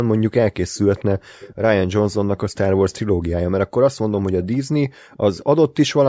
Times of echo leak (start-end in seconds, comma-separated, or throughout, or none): 0.74-1.05, 1.39-1.55, 2.37-2.57, 4.12-4.47, 5.11-5.38